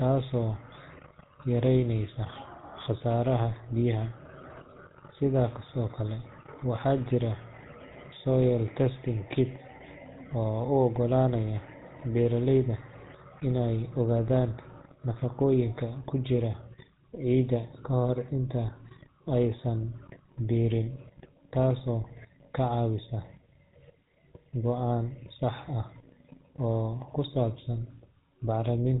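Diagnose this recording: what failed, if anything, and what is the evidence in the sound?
Codec stage: GSM full-rate coding throughout. The speech sounds plainly buzzy and gravelly, with nothing above 3.8 kHz. This fits GSM's 13 kbps pulse-excited vocal-tract model.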